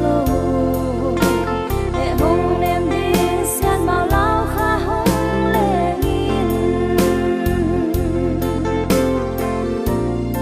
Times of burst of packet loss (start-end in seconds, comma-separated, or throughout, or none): none